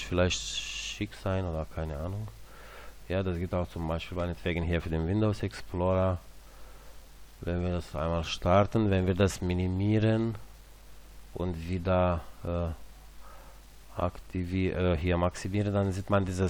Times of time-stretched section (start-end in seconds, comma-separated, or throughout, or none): none